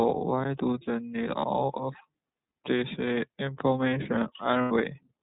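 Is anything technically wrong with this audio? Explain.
Yes. Throughout, the speech sounds band-limited, slightly rough and synthetic, with plainly audible coding damage. This is the iLBC codec, a narrowband coder that passes nothing above 4 kHz and codes each frame's excitation independently. The texture fits its 13.33 kbps, 30 ms frame mode.

From 4.62 to 4.72 s, a short stretch turns into a held, buzzy vowel-like tone. These are lost iLBC frames. The decoder filled about 90 ms, consistent with three missing 30 ms frames, by repeating the last pitch cycle mixed with noise, then recovered almost immediately.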